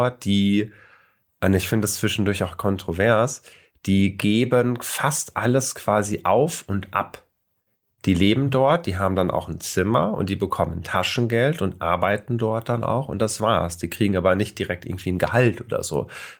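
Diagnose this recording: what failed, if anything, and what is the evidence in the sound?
Network: lost packets rebuilt from error correction leave brief rough, noisy patches at 3.99, 8.65–8.75, 10.93–10.95, 12.11, 13.15–13.17 and 14.91–15.05 s, decoded from low-bitrate redundant copies.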